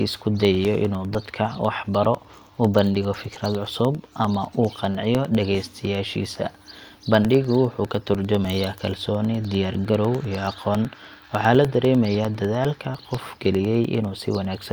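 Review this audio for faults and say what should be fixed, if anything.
Periodic USB or driver dropouts tick through the speech from 0.15 to 14.65 s, every 0.1 s. A blocked driver silences about a millisecond each time, seen as evenly spaced vertical broadband lines and tiny flat gaps. Prevent it by disabling polling background tasks and using a dedicated USB port with a larger buffer.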